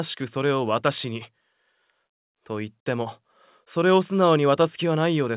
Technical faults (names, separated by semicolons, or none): none